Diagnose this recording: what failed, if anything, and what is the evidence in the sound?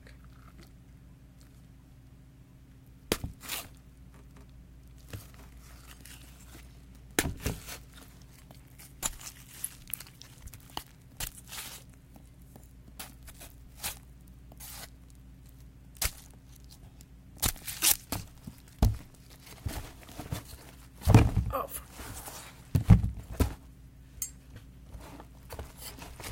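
Nothing failed at any stage of the chain; the sound carries no audible evidence of a fault anywhere in the recording.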